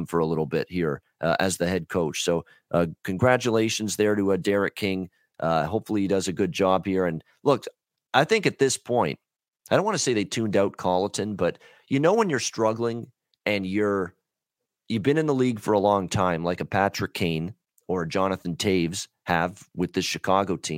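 No technical faults can be heard anywhere in the speech. There is nothing to mark at any point in time.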